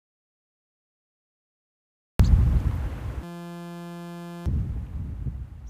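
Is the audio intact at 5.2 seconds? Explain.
Yes, the audio is intact at 5.2 seconds, with no dropout, click, distortion or other fault at that moment.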